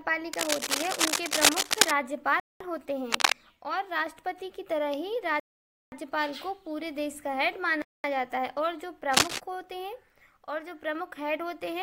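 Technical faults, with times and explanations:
0.33–1.91 s, 3.12–3.33 s and 9.12–9.38 s, cable scratch noise: dense, uneven scratching sits over the sound at roughly 5 dB above it, likely from a worn cable or connector shifting its contact resistance. A spectrogram shows ragged broadband smears; the waveform shows jagged bursts.
2.40–2.61 s, 5.40–5.92 s and 7.82–8.04 s, Bluetooth stall: the sound drops to silence for 0.21 s, 0.52 s and 0.22 s, then resumes. This is likely a starved headphone buffer waiting on resent packets. The waveform shows a flat gap, and the spectrogram shows a blank vertical band.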